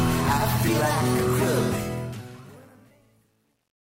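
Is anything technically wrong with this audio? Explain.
Yes. There's truncation distortion on the fade-out. From 1.6 s to the end the tail gets grainy. The fade stage is dropping bits without dither, which fits about 10 bits of word length, so as the level sinks the waveform collapses into coarse square steps. It's worst from 2.43 s to the end, where the sound turns gritty.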